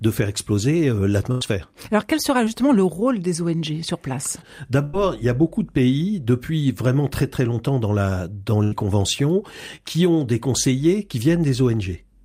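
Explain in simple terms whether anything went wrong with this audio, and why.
Three times, the speech briefly breaks up. This is a burst of packet loss. It happens at 1.31 to 1.43 s, right after "de faire exploser", at 4.84 to 4.95 s, between "sur place" and "il y a beaucoup", and at 8.63 to 8.74 s. Each time, a chunk of the call arrived too late or not at all. The receiver stretched the last sound for about 90 ms and faded it out. Then the talk picks up again, with 80 to 100 ms simply gone.

A smaller glitch comes at 9.76 to 9.79 s, just before "qui ont des conseillers". This is a short concealed packet loss. About 20 ms of audio went missing. The receiver patched the hole by carrying on the previous sound for roughly 18 ms, then blended back in. It is heard as a quick smear or wobble rather than a real gap.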